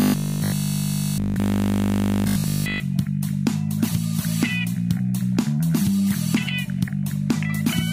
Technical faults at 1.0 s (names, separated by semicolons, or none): robotic sound from repeated short buffers